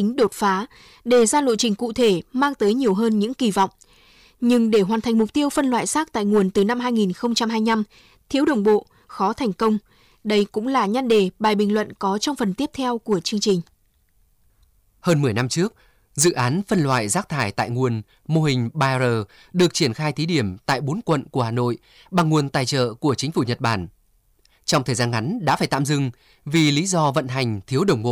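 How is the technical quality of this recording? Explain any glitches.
The recording has one fault. Hard clipping runs throughout: the speech is driven about 9 dB past full scale, so peaks are sheared flat, adding harsh upper harmonics heard as crackle on louder syllables.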